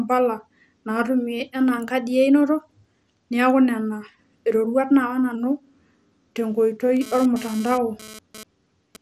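Across the whole speech clip the sound is dull and gurgling, with granular distortion. The likely cause is MP2 compression at a low rate, around 80 kbps. On a spectrogram nothing appears above 15.5 kHz, and the upper sub-bands flicker on and off as blocky patches.

From 1.09 to 3.00 s, and again from 4.65 to 5.35 s, the speech runs about 5.9% fast and rises by almost exactly a semitone, then snaps back. This is likely a drift correction step, where clock-matching software abruptly changed the playback rate. A spectrogram shows the harmonics jumping upward and returning at those edges.

From 6.97 to 8.96 s a hard, raspy GSM phone buzz at 217 Hz sits about 18 dB below the speech. It comes and goes in a pattern that suggests a data transfer. A spectrogram shows a comb of evenly spaced harmonic lines, and the waveform shows regular pulses unrelated to the speech.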